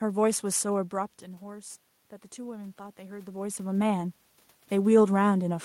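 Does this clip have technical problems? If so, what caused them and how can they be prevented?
Yes. Between 2.34 and 3.66 s you can hear automatic gain rising. The input level dropped by about 12 dB, likely because the talker moved back from the mic around the 1-second mark, so the gain control crept its gain up by about 3 dB. Since it boosts everything, the room noise swells along with the speech over that stretch. To prevent it, set a fixed input gain and keep the talker at a steady distance from the mic.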